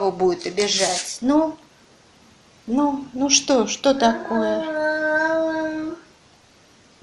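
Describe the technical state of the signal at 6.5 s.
At 6.5 s the audio carries plainly audible damage, likely from MP2 compression, present across the whole clip. Starved upper sub-bands switch on and off and the rest are coarsely quantised, giving a dull, gurgling, granular sound that fits a rate around 80 kbps.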